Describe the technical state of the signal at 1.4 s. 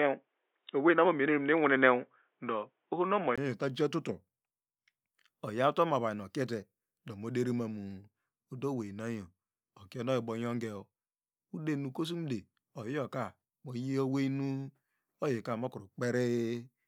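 At 1.4 s the sound is dull and boxy, with nothing above about 3.8 kHz, a faint background noise of its own, and a level a few decibels different from later on. This narrowed stretch runs from the start to 3.38 s, where a 20 ms silence marks the change to fuller sound. The likely cause is an input switched to a poorer device: the recording began on a narrower-band microphone or headset call profile, then changed inputs.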